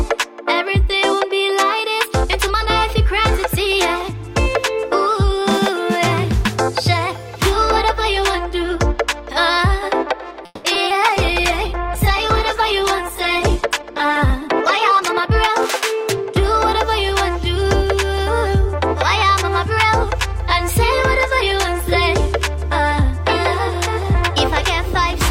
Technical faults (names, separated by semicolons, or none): call audio freeze; short concealed packet loss; call bitrate drop; jitter buffer slow-down; jitter buffer speed-up